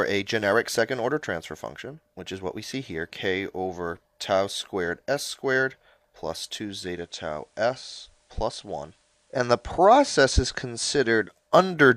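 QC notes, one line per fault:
6.73–11.59 s digital radio blending to analogue. Digital signal lost, 421 ms cross-fade to FM. Level about 2 dB lower, faint hiss.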